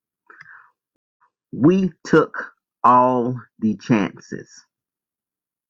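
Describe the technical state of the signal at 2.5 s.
At 2.5 s the speech signal is intact, with no audible dropout, clipping, distortion or other fault at that moment.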